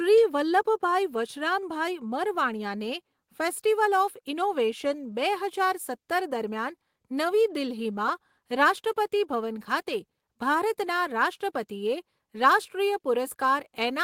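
Nothing goes wrong anywhere in this speech recording; there's not a single technical fault to point to from beginning to end.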